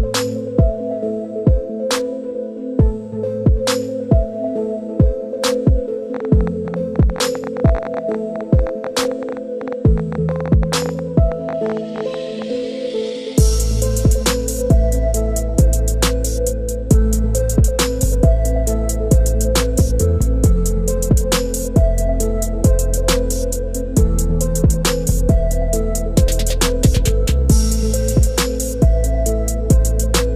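From 6.14 s to 12.43 s a train of clicks ticks and pops over the audio, uneven in spacing and averaging about 12.9 per second, around seventy in all, peaking about 5 dB above the sound, likely from electrical interference or a faulty connection or power supply.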